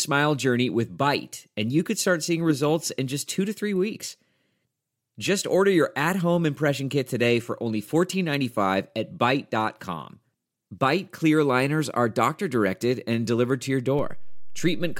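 At 13.99 s the speech picks up a DC step. The waveform's zero line jumps by about -26 dBFS and holds there until the end. The jump is heard as a single low thump or click. The speech carries on unchanged over the shifted baseline.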